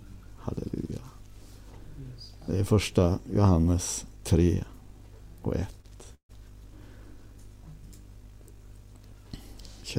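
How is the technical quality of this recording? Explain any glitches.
Two brief delivery glitches affect the recording, both near the six-second mark.

A short stall from a late packet occurs at 5.81 to 5.86 s. A packet missed its playout time, so the empty jitter buffer held the last sound for 23 ms until it arrived. The sound drags slightly, but nothing is lost.

A call audio freeze follows at 6.14 to 6.31 s. Playback stalls for about 147 ms: the last sound continues as a fading buzz or hiss, then goes silent for about 80 ms before resuming where it stopped. The likely cause is packets held up in transit draining the jitter buffer.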